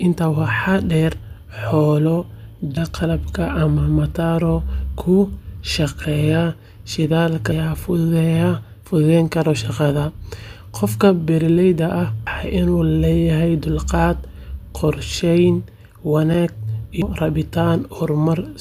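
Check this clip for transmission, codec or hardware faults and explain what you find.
Two kinds of fault are present: repeated skips where audio goes missing between chunks, and one brief block of digital silence.

Audio missing between chunks: at 2.77, 7.52, 12.27 and 17.02 s the speech jumps forward abruptly, dropping roughly a third of a second, with the surrounding material butted together and no gap; the one at 7.52 s lands just before "fududeyn kara". The regular spacing points to recording in 5-second chunks, with a short stretch likely lost each time one chunk closed and the next opened.

Block of digital silence: at 16.34 s a tiny tick is heard, a 5.8 ms hole where the signal drops out and returns with no fade. This happens when output samples are not delivered in time and zeros fill the gap; the length fits a 256-sample buffer that went unfilled for one cycle.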